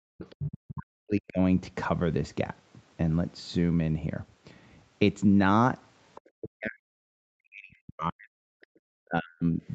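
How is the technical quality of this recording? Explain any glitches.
The recording has two recurring glitches from a call's echo handling: the talker's speech repeatedly ducks away, and a second voice bleeds in underneath. The audio is band-limited, with nothing above 8 kHz, consistent with an Opus call path at around 32 kbps.

Speech suppressed in double talk occurs from 0.0 to 1.39 s, 6.4 to 8.48 s and 9.04 to 9.62 s. The talker's speech sinks sharply in these stretches, by about 40 dB at its deepest, so parts fade or drop out in pieces. This is likely the echo canceller reacting to both sides speaking at once. Unable to tell the local voice from loudspeaker echo, it turned everything down together.

The other side's voice leaking through appears from 0.23 to 0.5 s, 6.15 to 6.29 s and 8.61 to 8.66 s. A second voice sits behind the talker, about 10 dB below the speech in the first instance, about 25 dB below in the second, and about 35 dB below in the last, a brief scrap. 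The likely cause is the far end playing through a loudspeaker into the microphone, with the echo canceller not removing all of it.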